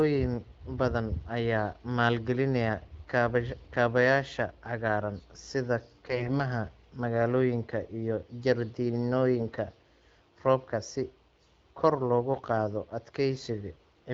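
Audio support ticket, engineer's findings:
Hoarse, scratchy, gargly burst at 6.05–6.37 s; pitch and level roughly held. Probable component: radio link into the AMR-WB decoder, which is audible as the band-limited, clean-edged wideband sound that fits the 12.65 kbit/s mode. AMR bit errors: a few percent of the weakly protected bits flipped across a short run of frames. Checksum on the critical bits passed, so the frames were decoded rather than concealed. Pulse positions are misplaced, and the fine pitch, gain and spectral values are off.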